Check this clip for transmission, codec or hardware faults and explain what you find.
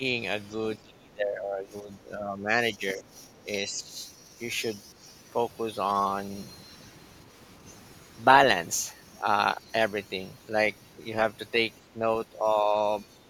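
Two echo-control faults are present. Both are grouped near the start, with two brief recurrences of the suppression near the end.

Speech suppressed in double talk occurs at 0.78–2.53 s, 2.77–3.14 s, 3.36–3.47 s, 3.65–3.94 s, 11.94–12.02 s and 12.32–12.46 s. The speech dips in level. The first stretch is the deepest, falling by roughly 20 dB. The others are shallower, around 5 to 15 dB. The likely cause is an echo canceller that met both sides talking at once. It could not tell its own talker from loudspeaker echo, so it pulled everything down.

The other side's voice leaking through appears briefly at 3.75–3.81 s. This falls inside the fourth suppression dip. It is a faint scrap of a second voice, roughly 35 dB below the main speech. It is likely residual loudspeaker echo that the canceller failed to remove from the microphone signal.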